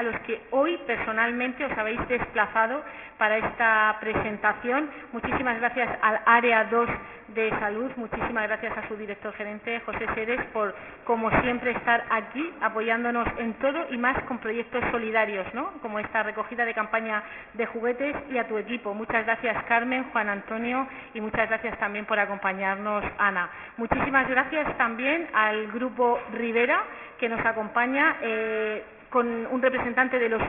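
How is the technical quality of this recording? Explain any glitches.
The technical quality is poor, with aliasing present from start to finish.

Aliasing runs through the whole recording. Everything sits under a hard ceiling at 3 kHz, which fits the audio being cut down to a 6 kHz sample rate with no filter beforehand. Content that was above 3 kHz hasn't been removed. It folds back down as wrong, unrelated tones, roughly 10 dB below the wanted sound, so bright, hissy parts turn gritty and metallic. On a spectrogram, energy piles up right to the 3 kHz edge with mirrored streaks slanting the wrong way.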